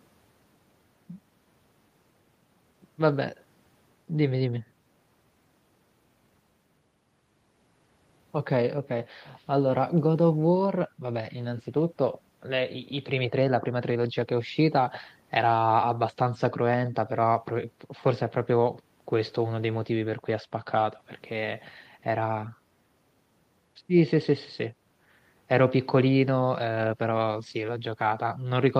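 No technical faults are audible anywhere in the speech recording.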